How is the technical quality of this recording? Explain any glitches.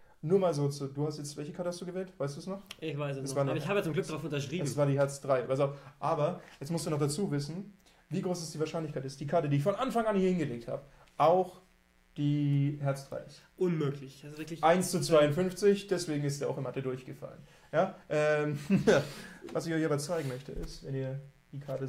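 The recording has one fault, mains buzz. From 7.49 s to the end, a raspy 60 Hz buzz sits about 40 dB below the signal. Switching spikes twice per mains cycle spray harmonics into the kilohertz range, appearing on a spectrogram as evenly spaced horizontal lines.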